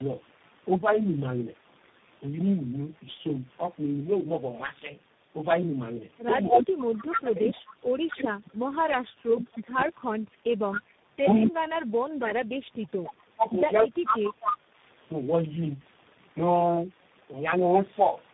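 Tandem speech coding runs through the whole clip. The speech has been squeezed through several speech coders in turn, which fits three of them in a row, something like AMR-NB, then G.729A, then CVSD, with a plain telephone-law stage between each. Every coder rebuilds the previous coder's already damaged output, so the errors stack up. The result sounds rough, muffled and warbly, with nothing above 3.8 kHz.

Echo leak appears from 10.71 to 13.12 s, and again briefly from 14.41 to 14.56 s. A delayed copy of the speech returns about 249 ms behind the original and only a few decibels quieter. The likely cause is a far end playing the call over a loudspeaker, where the echo canceller failed to remove everything its microphone picked up and sent the remainder back down the line.

Speech suppressed in double talk occurs from 11.22 to 12.11 s, inside the first echo stretch. The talker's level dips sharply, at its deepest by something like 35 dB, and the affected stretches add up to around 0.7 s. 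This is likely an echo canceller facing both sides talking at once. Unable to separate the near talker from the returning echo, it turned both down together.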